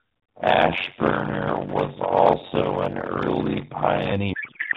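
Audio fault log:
0.00–4.12 s, block size mismatch (padded): blocks fitting 256 samples are zero-filled to a larger read size, causing a 92 Hz buzz and speech slowed to 0.53 speed with its timbre kept.
4.34–4.77 s, codec payload misread: octet-aligned AMR frames are unpacked as bandwidth-efficient, so fields land misplaced and the speech turns into garbled noise and warble.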